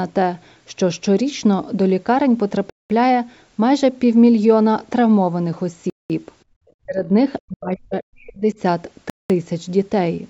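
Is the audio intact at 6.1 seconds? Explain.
No. At 6.1 s the sound is just resuming after a gap between chunks running from 5.90 to 6.10 s. The 200 ms of silence sits between chunks about 3 s long, a hard-edged hole that shows as a flat waveform and a blank vertical band on a spectrogram.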